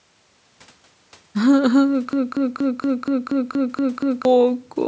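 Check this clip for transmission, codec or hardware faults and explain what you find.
One fault stands out: a broken-record loop from 2.13 s to 4.25 s. A short fragment of speech, about 237 ms long, plays nine times back to back with identical timing and content, giving a stuttering, mechanical repetition, and whatever should have been said in those two seconds never arrives. The likely cause is a stall in the player, encoder or stream, which kept resending the last chunk it held until fresh audio resumed. The call-style microphone processing, with nothing above 8 kHz, sits under the whole clip and is not part of this fault.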